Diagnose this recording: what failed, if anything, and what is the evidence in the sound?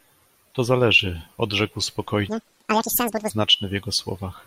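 A sample-format mismatch caused the audio to be read two samples at a time (double speed) from 2.29 to 3.30 s. The reader treated sample pairs as single frames, as if the stream had two channels or wider samples. The speech runs twice as fast and an octave higher.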